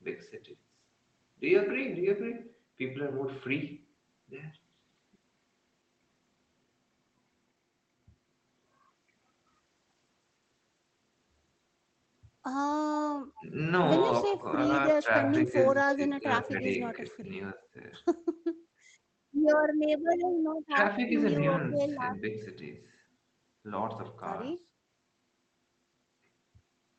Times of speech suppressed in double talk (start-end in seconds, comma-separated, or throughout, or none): 13.39-13.43, 14.23-14.38, 15.46-17.75, 20.68-20.78, 21.71-22.36